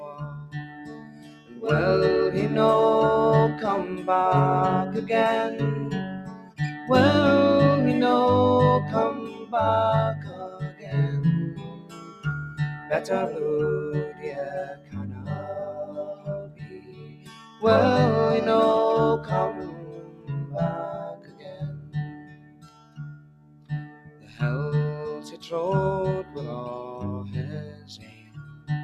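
A noise suppressor built for speech has been left running on this sound, treating steady tones and tails as noise. Level swings by about 15 dB as it clamps down and lets go, so held parts pump and thin while sharp attacks get through.

You can hear sound cut by the noise suppressor at 0.24–1.57 s, 6.19–6.6 s, 9.28–12.9 s, 14.12–17.62 s, 19.71–24.41 s, 25.35–26.36 s and 27.69–28.69 s. Sustained or decaying material sinks by about 11–12 dB at worst (only about 7 dB around 25.35 s), with tails chopped short.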